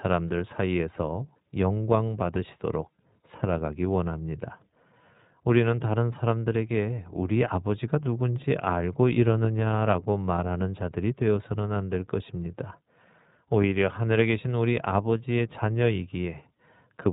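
From start to finish the speech carries iLBC codec damage, plainly audible. The band stops at 4 kHz, so sibilants lose their edge, and each 20 ms frame is coded independently, which leaves a rough, slightly synthetic texture consistent with the 15.2 kbps mode.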